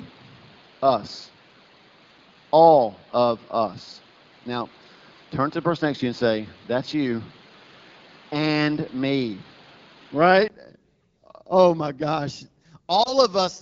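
From the start until 10.5 s, the recording likely came through a poorer input device. Nothing above 5.3 kHz gets through, so the speech sounds dull and boxy, with background noise roughly 30 dB down. At 10.5 s it clears, with a 20 ms gap and a level change of roughly 5 dB.

At 13.03 s a radio error corrupted one AMR speech frame. The decoder covered the missing 20 ms by repeating the previous frame's settings at reduced gain, so the speech briefly dips and warbles until about 13.12 s, after which the voice returns weak or rough for a moment under the lightly damaged AMR-WB coding.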